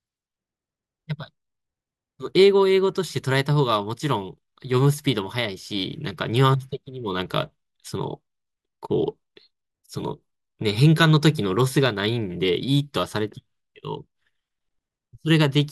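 No technical faults can be heard anywhere in the recording.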